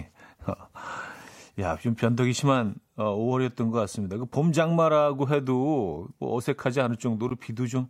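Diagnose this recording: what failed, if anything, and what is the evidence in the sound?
At 7.29 s the speech drops out for about 14 ms, a clean, hard-edged hole of silence. This is a gap between stream segments at playback: the timestamps of consecutive 6 s segments leave a small space, which the player pads with silence, adding 14.3 ms without losing any audio.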